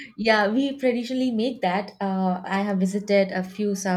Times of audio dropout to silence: none

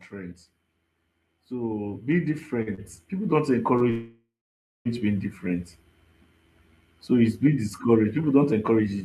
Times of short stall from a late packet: 2.62-2.80, 3.78-3.82

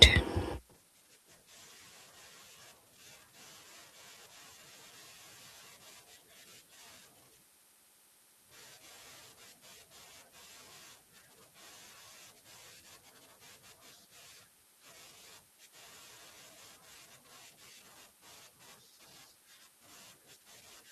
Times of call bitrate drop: 0.59-2.97

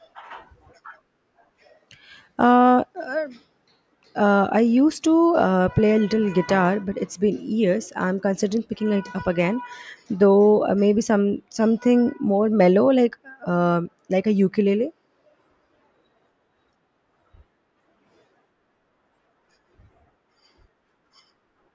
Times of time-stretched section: none

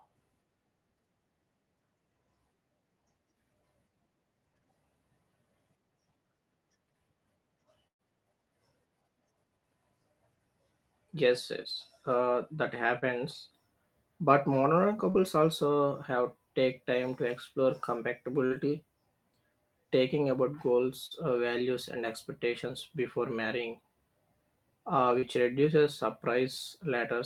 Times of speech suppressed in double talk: none

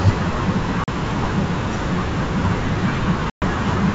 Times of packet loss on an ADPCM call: 0.84-0.89, 3.30-3.44

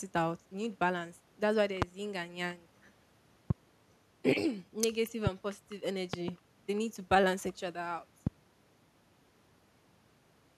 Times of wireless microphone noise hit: none

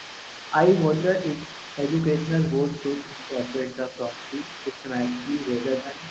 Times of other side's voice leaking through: 0.00-6.11

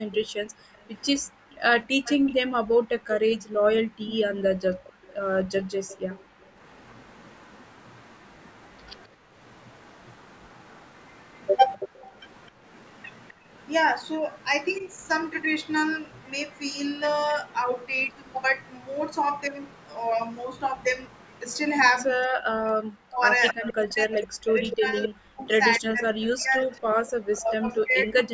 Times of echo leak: 0.76-2.33, 4.00-21.57, 23.49-27.53

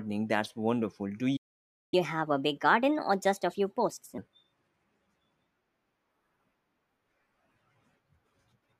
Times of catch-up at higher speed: 1.94-4.18

